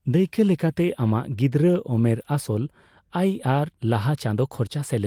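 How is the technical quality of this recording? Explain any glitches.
The technical quality of this recording is good, with no glitches to explain.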